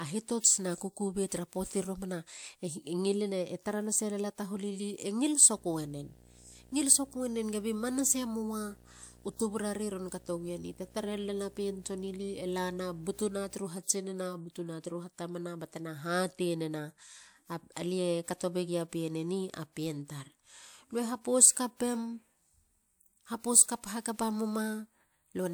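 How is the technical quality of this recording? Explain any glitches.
One fault stands out in this speech recording. From 5.56 s to 13.56 s there is video or display buzz: a screen or its video cable couples into the audio path, adding a 60 Hz buzz at the picture's field rate with hash above it, sitting well below the speech.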